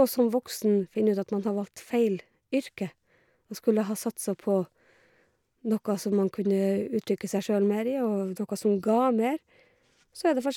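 No technical faults are audible.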